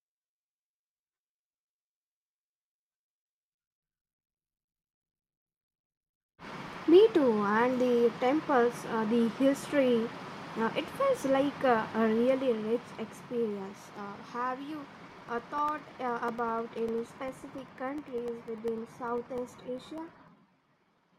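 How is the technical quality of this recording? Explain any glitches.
The recording has one clear problem: periodic USB or driver dropouts from 15.18 s, just after "have you", to 21.08 s. Ten times a second, about a millisecond of audio drops to silence, as if a background task were stalling the audio path at a fixed interval. The result is a steady ticking that sounds only under the speech. A waveform would show tiny gaps of silence spaced 0.1 s apart, and a spectrogram would show evenly spaced thin vertical broadband lines.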